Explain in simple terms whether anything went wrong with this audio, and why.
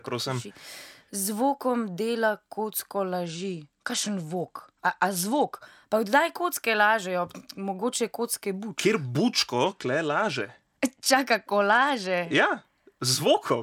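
Twice the sound turns dull and gritty, from 3.24 to 5.56 s and again from 9.66 to 12.64 s. That is a Bluetooth SBC bit pool drop: the wireless link got crowded, so fewer bits were spent, treble faded and coarse noise crept in.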